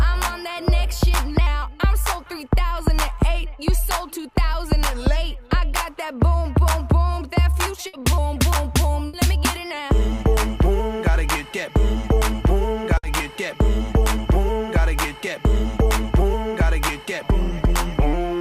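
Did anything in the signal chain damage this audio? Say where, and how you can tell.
Yes. A burst of packet loss, at the network stage, hits at 7.87 to 7.96 s, 9.07 to 9.16 s and 12.97 to 13.06 s. Each time, consecutive packets never arrived in time, so the receiver held the last sound for about 60 ms and faded it, leaving a brief sustained buzz or hiss. The audio then resumes with about 60 ms of material lost, so it jumps abruptly forward.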